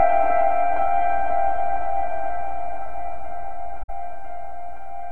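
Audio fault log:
3.83–3.90 s, AAC frame loss with muting: a gap of about 64 ms opens in the music, which fits roughly three lost frames. The decoder fills the missing frames with a zeroed spectrum, and the overlapping transform windows fade the sound out into the hole and back in afterwards, so the dropout has soft edges. On a spectrogram it shows as a vertical blank band across all frequencies with tapered sides. The waveform's envelope shrinks smoothly to silence and then recovers.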